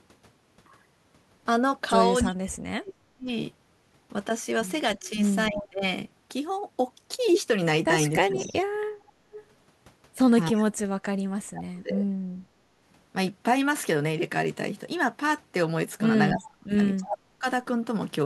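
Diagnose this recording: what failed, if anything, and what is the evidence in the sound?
The failure is in call processing. Speech suppressed in double talk appears six times: 2.23–3.28 s, 4.96–5.84 s, 8.18–8.37 s, 10.52–10.78 s, 11.44–12.1 s and 16.31–17.46 s. The level sinks, by about 40 dB at worst and about 10 dB at mildest, and parts of the speech drop out. This is likely an echo canceller that could not tell near-end speech from loudspeaker echo while both sides talked, so it attenuated everything.

Echo leak is also in call processing. A delayed copy of the speech returns 289 ms late at 5.5–5.64 s, about 10 dB below the speech. It returns again as a longer stretch at 8.36–9.46 s, about 15 dB down. The fixed lag points to a far-end loudspeaker path. That end's echo canceller likely left residual echo in its microphone signal and sent it back down the line.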